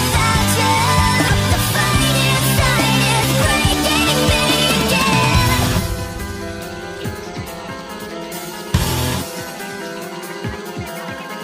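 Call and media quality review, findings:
Likely broken MP3 bit reservoir: frames dropped from the stream, so the next frame pulls its borrowed data from bytes belonging to another frame. Audible at 1.27 to 1.30 s as a brief glitch and a skip ahead, lasting about one 26.1 ms frame. Component: MP3 decode or stream delivery.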